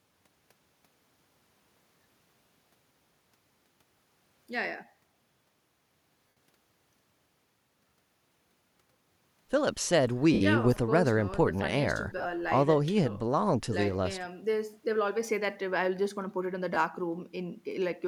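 Bluetooth LE Audio frames went missing four times, and the LC3 decoder filled each gap by repeating the last spectrum with randomised signs, so the speech smears into a brief noisy hiss instead of cutting out. This happens at 6.28 to 6.36 s, 10.33 to 10.41 s, 12.18 to 12.26 s, where the losses come in short scattered bursts of up to around 20 ms, and at 16.75 s, a 15 ms gap consistent with just two lost frames.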